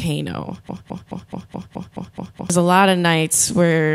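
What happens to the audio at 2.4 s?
At 2.4 s the speech is still caught in a broken-record loop running from 0.69 to 2.50 s: a 0.21 s fragment repeats exactly, eight times back to back, likely because playback or the stream stalled. Unlike echo, the repeats never fade, and the speech from that stretch is lost.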